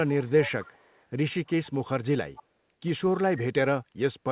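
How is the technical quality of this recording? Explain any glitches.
The recording has an echo leak, heard twice on a call path that carries nothing above 4 kHz, consistent with G.711 at 64 kbps. From 0.26 to 1.05 s and again from 2.35 to 2.43 s, a far-end echo canceller likely let its loudspeaker pickup through. A faint copy of the speech returns 262 ms late, about 20 dB below the talker in the first stretch and about 25 dB below in the brief second scrap.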